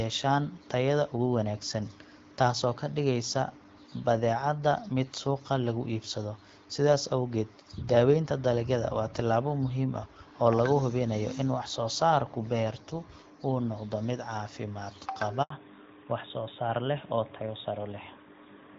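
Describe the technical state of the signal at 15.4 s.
At 15.42 s the speech drops into a handover gap lasting 80 ms, through 15.50 s. The call was being passed from one network link to another, and during that switch no speech frames reached the decoder. The voice fades out within a few tens of milliseconds and the signal sits silent until the new link delivers audio again. Whatever was spoken in that interval is lost. The AMR wideband (HD Voice) coding on either side sounds clear, which fits the 12.65 kbit/s mode.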